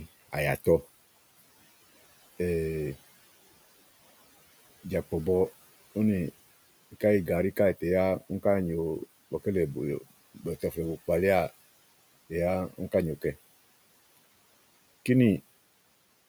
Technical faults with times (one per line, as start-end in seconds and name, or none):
10.35-10.77 speech cut by the noise suppressor